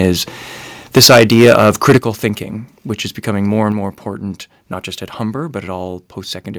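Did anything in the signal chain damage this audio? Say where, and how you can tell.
Yes. The input stage most likely had its gain set too high, so peaks hit the converter's ceiling: briefly at 0.03 to 0.09 s (about 2 dB over), then heavily from 0.96 to 1.97 s, about 14 dB over with roughly a tenth of samples flattened, giving a harsh, crackling edge before "thinking which is becoming".

The call processing likely then stepped the microphone volume down in discrete jumps: about 2 dB at 0.98 s, about 8 dB at 1.98 s just before "thinking which is becoming", and about 4 dB at 3.72 s between "which is becoming more" and "more important not just". Each is an abrupt level drop in voice and background together.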